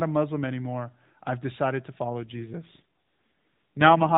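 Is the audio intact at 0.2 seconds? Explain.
Yes, the audio is intact at 0.2 s, with no fault at that moment, only the narrowband band limit of the AMR narrowband mobile codec, which passes nothing above 4 kHz.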